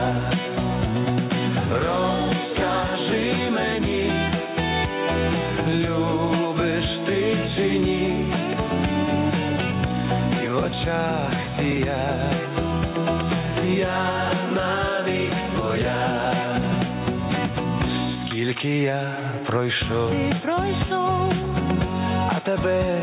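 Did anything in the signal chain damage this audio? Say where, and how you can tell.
Yes. Gain pumping runs throughout, likely from input gain set far too high at the capture or call-processing stage, with a fast limiter clamping each loud sound. The gain ducks by around 5 dB under loud moments, squashing the dynamics.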